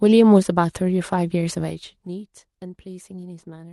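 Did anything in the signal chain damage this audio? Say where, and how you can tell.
Yes: zipper noise from 1.6 to 2.09 s. Gain processing cut the level about 15 dB in 1 dB steps around fifty times a second, likely once per buffer, leaving evenly spaced thin vertical ticks on the spectrogram.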